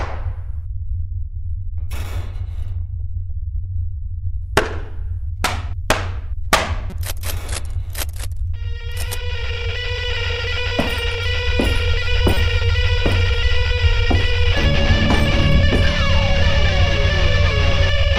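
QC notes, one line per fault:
6.90–6.93 s, corrupt frame decoded: brief glitch as a damaged compressed frame plays with wrong gains or misread codes, showing as a short vertical smear of misplaced energy peaking about -15 dBFS.
12.34–12.37 s, corrupt frame decoded: louder glitch, spanning what sounds like two frames. Wrong gains or misread codes push its error to about 0 dBFS, a sharp waveform spike with misplaced energy on the spectrogram.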